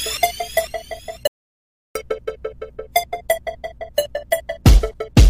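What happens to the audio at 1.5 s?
At 1.5 s the sound is in the middle of an audio dropout to silence. From 1.27 s to 1.95 s it cuts out completely, about 680 ms of silence with no room tone, then picks up mid-flow. It's likely the input dropped while the recorder kept writing, so that stretch is simply lost.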